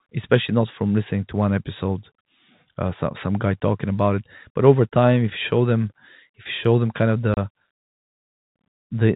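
At 7.34 s, just after "show them kind of", packet loss filled with silence cuts a 30 ms hole with hard edges, consistent with three lost 10 ms packets.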